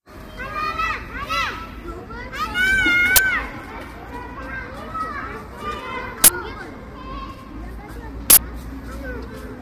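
A recording of everyday sounds, with grainy, rough low-delay AAC compression throughout. It is likely AAC-ELD at a low bitrate, about 32 kbps. There are three uninitialised buffer bursts of loud digital noise, at 3.16–3.18 s, 6.24–6.28 s and 8.30–8.38 s. Each is stale memory played as samples, in blocks of 20, 40 and 80 ms.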